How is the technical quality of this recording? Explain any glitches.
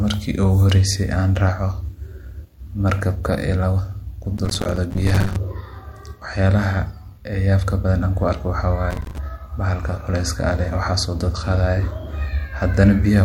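The speech is marred by two bursts of processor overload crackle. The first runs from 4.37 to 5.36 s, just after "markabka iilaba"; the second, shorter one from 8.91 to 9.18 s, after "an ku arko waxa". Each sounds like gritty, rapid clicking torn through the speech. The processor repeatedly missed its deadlines, so dozens of tiny buffers, each around 5 ms, dropped to silence with hard edges before the load eased.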